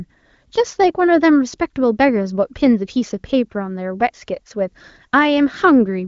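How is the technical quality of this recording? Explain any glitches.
Nothing in this recording stood out as a glitch or technical problem on listening.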